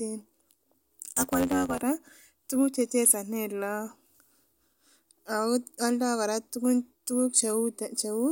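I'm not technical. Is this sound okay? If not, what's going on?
No. From 1.08 to 1.84 s there is a block size mismatch (truncated): one stage passes on longer chunks of audio than the next accepts, so each chunk's end is dropped. That causes a low buzz near 92 Hz, fitting 512-sample blocks, and speech running 1.07 times fast.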